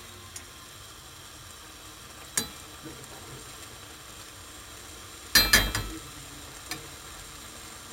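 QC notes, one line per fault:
throughout, imaging from sample-and-hold upsampling: samples repeated unfiltered, fitting 16 kHz raised to 44.1 kHz, leave mirrored images at 8–16 kHz, about 8 dB down, as metallic fizz tracking the sound.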